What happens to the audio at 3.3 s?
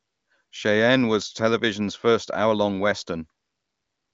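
At 3.3 s the speech carries on intact, with nothing breaking into it as it passes through the AMR wideband (HD Voice) codec.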